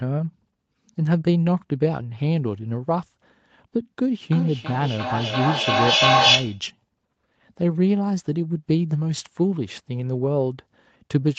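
From 4.31 to 6.66 s a feedback echo between two devices sets in: the speech returns about every third of a second, thinner and more ringing each pass, building to about 4 dB above the speech. Room reverb smears the sound, but here distinct repeats at a fixed spacing pile up instead of fading.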